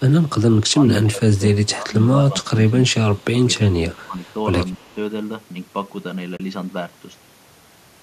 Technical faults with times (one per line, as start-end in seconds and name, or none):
0.09-0.30 echo leak
1.05-4.22 speech suppressed in double talk
3.18-3.24 echo leak
4.27-4.32 echo leak
4.78-4.86 speech suppressed in double talk
4.85-4.93 echo leak
6.37-6.40 AAC frame loss with muting